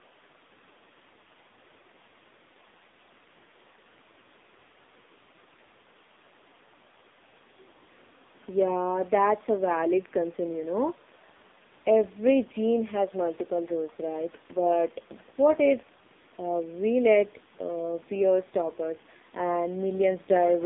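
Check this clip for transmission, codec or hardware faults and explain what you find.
One codec fault runs through the whole clip. Throughout, the AMR narrowband mobile codec squeezes the speech into a 200 Hz to 3.7 kHz band and rebuilds it from a sparse pulse-driven vocal-tract model. The heavy buzzy, synthetic damage points to a low mode of around 5.9 kbps. The call microphone processing, which takes out only the lowest bass, is not at fault.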